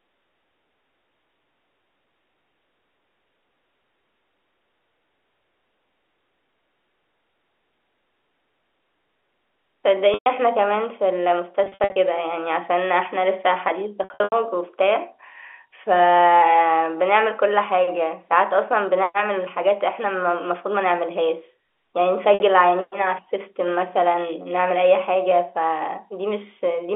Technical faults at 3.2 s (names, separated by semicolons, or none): none